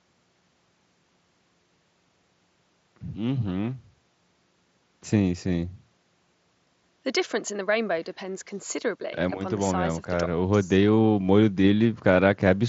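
No faults are audible in this speech; the mSBC Bluetooth headset path carries it wideband up to about 8 kHz, with a light grain on the louder sounds.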